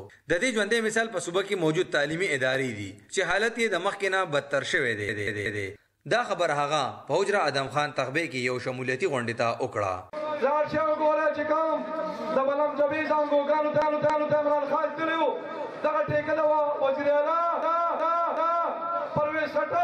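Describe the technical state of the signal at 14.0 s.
At 14.0 s the signal is inside a run of repeated frames spanning 13.82 to 14.38 s: a 278.6 ms block plays twice more, stuttering and adding 557 ms. Unlike a dropout or skip, no audio vanishes or jumps ahead; identical material recurs.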